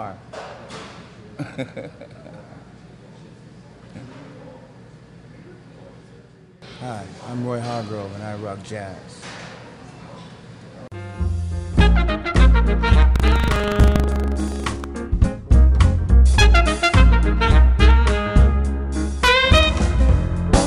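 From 13.12 to 14.86 s, buffer tearing puts a steady 25 Hz robotic buzz on the sound. Each roughly 40 ms period carries a small slice of audio from about 150 ms earlier between hard joins. Unlike dropouts, nothing falls silent.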